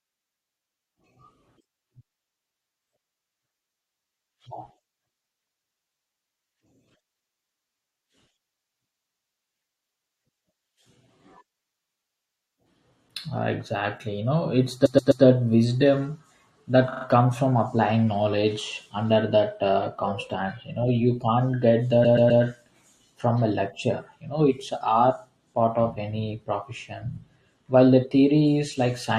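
A stutter replays the same fragment three extra times at 14.85 s after "know it's", 16.92 s before "comes from applying knowledge" and 22.04 s after "know you can't get". These are repeated frames: a 128 ms block (43 ms at 16.92 s) recurs, lengthening the audio by up to 384 ms.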